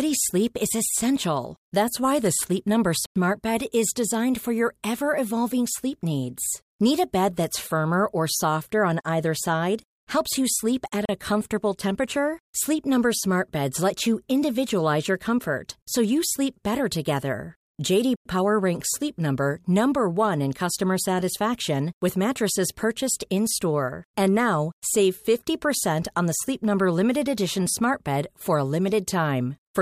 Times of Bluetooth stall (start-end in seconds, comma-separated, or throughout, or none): 3.06-3.16, 11.05-11.09, 18.16-18.25